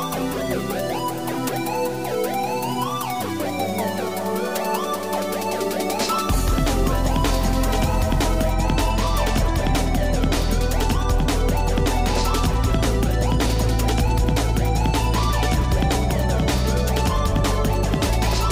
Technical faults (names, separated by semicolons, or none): stuck bit